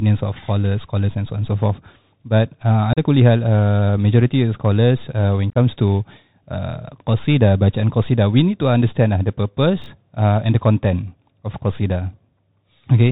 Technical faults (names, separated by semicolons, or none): Bluetooth CVSD headset codec; unconcealed Bluetooth headset packet loss; chunks out of order